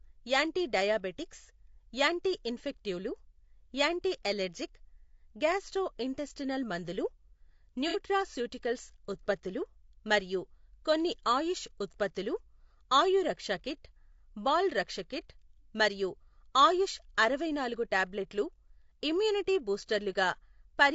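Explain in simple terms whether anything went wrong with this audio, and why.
Throughout the recording the speech sounds rough and grainy, with a hiss between tones, most likely from low-delay AAC compression squeezing the sound into very short packets. From 7.88 to 7.98 s there is AAC frame loss with concealment: a short chunk of audio went missing, and the decoder guessed its way over the gap, leaving a brief smeared, noisy patch.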